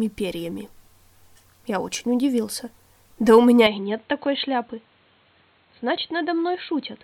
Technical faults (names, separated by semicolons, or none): input switched to a poorer device